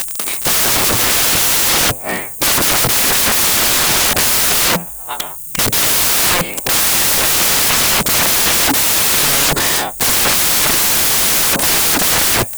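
From start to finish the speech comes with loud, harsh broadband noise, the mark of samples built from the wrong bytes. The reader assembles each sample with its bytes misplaced, so the rapidly changing low bits land in the high-order positions and dominate every value.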